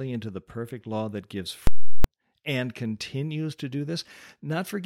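A speech clip with invalid numbers at full scale from 1.67 to 2.04 s, after "perfect law that gives" and before "and continues to do". A calculation produced infinite or invalid values that were forced to the largest sample value, so the output sits flat at one extreme value, far from zero, for the whole block. That gives a very loud pop at each end with no sound between, and the 0.37 s length fits a 16384-sample block. On a waveform it is a flat slab far from zero, beyond the speech peaks. A spectrogram shows a broadband vertical stripe at each edge with nothing in between.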